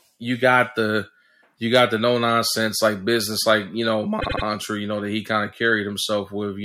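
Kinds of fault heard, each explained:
Repeated frames: after "business like you know", a 78 ms block plays three extra times. This stutter adds 0.24 s, which fits compressed frames sent again.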